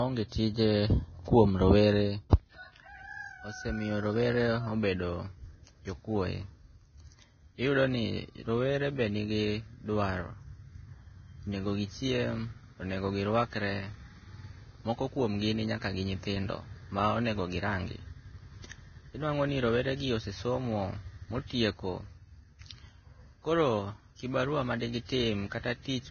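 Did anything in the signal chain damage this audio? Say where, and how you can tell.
Yes. The damage is likely at the codec stage: Vorbis compression at a very low rate, which fits something near 18 kbps. Throughout the clip nothing is present above 6.5 kHz, and what treble remains is so coarsely quantised that it turns into grainy hiss over the speech.

Pre-echo appears from 2.30 to 2.33 s, just after "tije kuomrowere": a 32 ms wash of hiss runs ahead of a sharp onset. The transform block spreads noise sized for the loud attack across the quiet moment before it, which softens and smears that onset.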